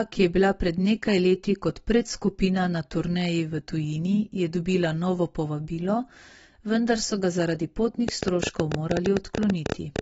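The speech carries AAC compression damage the whole way through, most likely AAC-LC at a low rate, which fits something around 24 kbps. There's nothing above 7.7 kHz, so it sounds dull, and the smeared, warbly texture is plainly audible on sustained sounds and sibilants.

From 8.09 s to the end at 10.00 s there's a train of clicks, about ten a second but irregularly spaced, around twenty in all. Each pops out about 15 dB above the speech. The cause is likely interference or a faulty connection.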